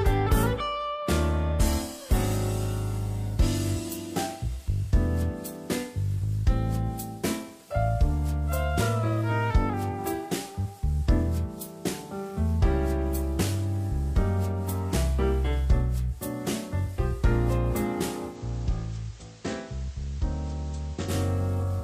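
From 18.27 s to 21.14 s the receiver shows digital radio blending to analogue: it lost the digital stream and cross-faded over about 103 ms to the station's FM broadcast, which drops the level by about 5 dB and adds hiss roughly 25 dB below the signal, before blending back.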